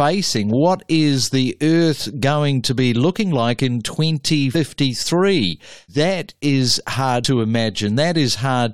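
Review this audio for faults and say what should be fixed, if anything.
Two spots of compressed frames skipped. At 4.54 s the speech jumps ahead by roughly 100 ms, which fits about five frames of 23.2 ms. At 7.23 s it jumps by roughly 70 ms, about three frames. Whole frames never reached the output, either missing or rejected by the decoder as damaged. To prevent this, re-encode from an intact source and verify the file's integrity before delivery.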